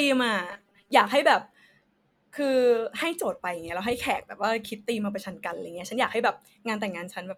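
A short speech recording with robotic sound from repeated short buffers between 0.51 and 0.91 s. For that stretch the voice collapses into a stiff, metallic buzz pitched at 200 Hz that still loosely tracks the syllables. The likely cause is audio arriving too slowly, so playback loops a 5 ms slice to fill the gap and skips most of the real signal. On a spectrogram this appears as flat, evenly spaced harmonic lines at multiples of 200 Hz. The waveform shows roughly repeating 5 ms cycles.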